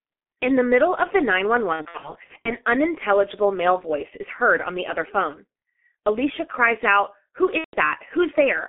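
From the start, the whole clip runs through the G.723.1 codec, and it's heavy going. The band is squeezed to roughly 200 Hz to 3.4 kHz, so everything's muffled, and the slow-updating voice model at what sounds like the 6.3 kbit/s mode leaves the speech hoarse, with consonants smeared into each other. It's a low-rate coder trading detail for bits, and you can hear the trade.

Between 1.73 and 2.55 s there's VoIP packet loss concealed by the speech codec. The dropouts are scattered over about 720 ms, adding up to roughly a third of a second missing, which fits about eleven lost 30 ms frames, with the longest gap around 60 ms. Each time, the decoder carries its last pitch and filter forward while turning the gain down, so the sound stretches into a buzzy tone or coloured noise that fades, and stays weak and warped briefly after it recovers. The same thing happens again from 7.58 to 7.78 s, this time with 150 ms lost, about five frames' worth.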